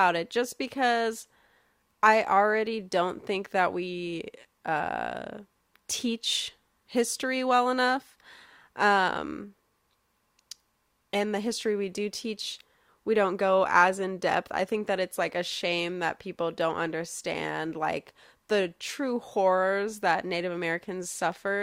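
Nothing in the recording stands out as a technical problem: the speech runs along from beginning to end without any fault to point to.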